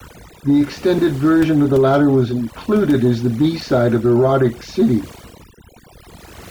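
Overdone noise removal, applied for the whole length of this speech recording, is the problem: a noise reducer set far too aggressively has been pulling individual frequency bands down or muting them whenever their level sits close to its noise estimate. The pauses collapse into near silence sprinkled with twinkling, chirpy specks, and the quieter components of the voice get stripped away too.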